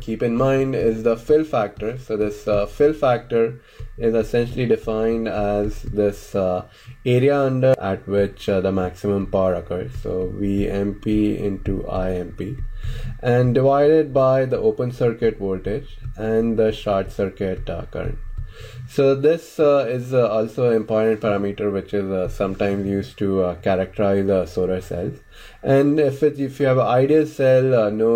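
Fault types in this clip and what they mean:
Nothing stood out on listening; no fault of any kind could be heard anywhere in the clip.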